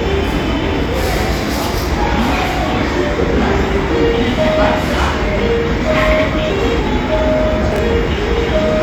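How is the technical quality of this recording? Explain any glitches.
Two short glitches break up the sound near the end of the recording.

At 6.46 to 6.50 s there is a brief glitch. This is damaged data in a compressed stream. Some of the bytes for that stretch were lost or overwritten, so the decoder could not read those frames, lost sync and searched for the next valid frame header. The result is about 40 ms of garbled output.

At 7.72 to 7.78 s there is a short jumbled stutter. The chunks are out of order here. A 20 ms chunk arrived or was written two chunks late, so it plays after material that should have followed it. No audio is missing, but the order is scrambled. That creates three abrupt joins where the waveform doesn't line up, around a garbled moment of roughly 60 ms.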